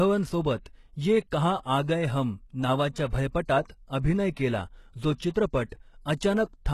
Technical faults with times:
0.00-6.73 HE-AAC compression

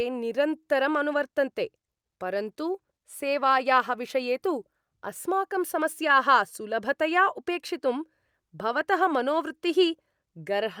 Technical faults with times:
none

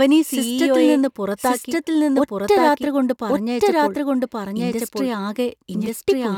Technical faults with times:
0.00-6.38 doubled audio track

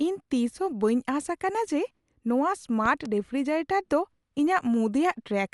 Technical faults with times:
0.00-5.54 Dolby Digital compression
2.86-3.08 loud pop

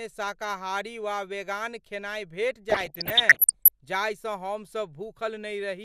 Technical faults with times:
2.70-3.69 DAB burbling

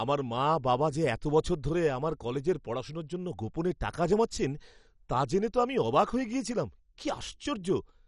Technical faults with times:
0.00-8.08 MP2 compression

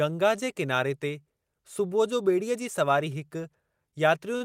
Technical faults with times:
4.37-4.41 short stall from a late packet

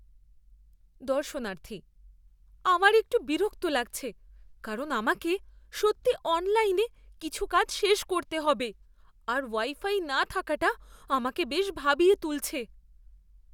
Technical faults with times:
none

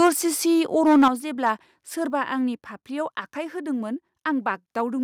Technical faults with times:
0.00-0.09 microphone overload
0.07 microphone volume stepped down
0.85-1.08 microphone overload
1.08 microphone volume stepped down
1.46-1.50 microphone overload

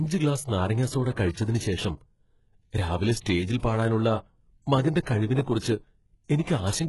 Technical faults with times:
0.00-6.89 HE-AAC compression

